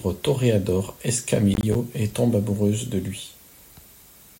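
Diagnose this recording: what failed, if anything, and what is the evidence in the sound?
The failure is at the driver or buffer stage. A processor overload crackle runs from 1.54 to 1.75 s, just before "et tombe amoureuse de". The speech turns gritty and torn for about a fifth of a second. The sound points to a processor that could not fill short buffers, around 10 ms each, in time. Several deadlines, roughly seven, were missed over that stretch. Each miss dropped in a hard-edged gap of silence. Together the gaps form the crackle.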